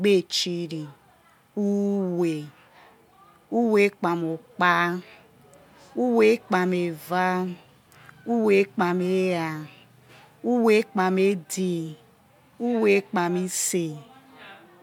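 No technical faults can be heard anywhere in this speech recording. There is nothing to mark at any point along its timeline.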